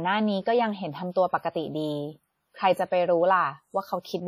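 From start to finish the speech carries a ringing, washy smear, with a hiss that swells and fades along with the signal and quieter detail thinned out or missing; nothing sounds above about 19.1 kHz. This is likely WMA compression, applied heavily. The transform coder spreads its quantisation noise over long blocks, smearing it tens of milliseconds around each sound, and discards weak spectral lines, a degree of damage that fits a bitrate near 32 kbps.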